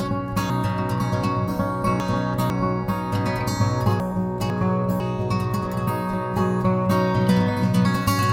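Music, with two places where chunks play out of order. From 0.5 to 2.5 s, one 500 ms chunk arrives three chunks late, so it plays after material meant to follow it. From 4.0 to 5.0 s, a 500 ms chunk is one chunk late. Nothing is missing, but each misplaced chunk creates three hard joins, and the music briefly sounds jumbled.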